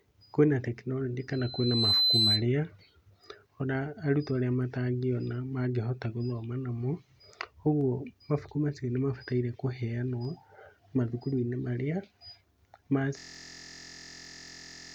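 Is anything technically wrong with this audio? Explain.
Yes. There are three kinds of technical fault in this speech clip.

From 1.33 to 2.45 s there is loudspeaker feedback squeal. A microphone is hearing the loudspeaker it feeds. At 4 kHz the loop gain passes one. A pure tone swells over about half a second until it sits about 5 dB above the speech.

At 7.81 s and again at 10.25 s there is a single sharp click. Each is a tiny break in the waveform, far too short to remove any sound. The likely cause is dropped samples, where a handful of samples went missing and the signal jumped ahead.

From 13.18 s to the end there is a system hang loop. The system froze while the sound hardware kept replaying one 23.22 ms piece of its buffer. That length fits a 1024-sample buffer. The exact repeats at 43.1 Hz make a steady, rough buzz.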